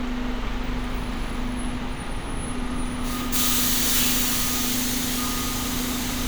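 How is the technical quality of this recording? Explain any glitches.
The recording has no technical glitches to explain. The audio runs without any break, distortion or interruption.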